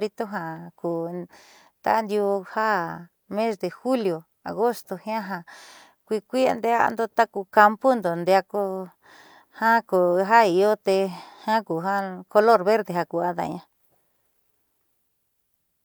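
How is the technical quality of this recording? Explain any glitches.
No technical glitches can be heard anywhere in this recording.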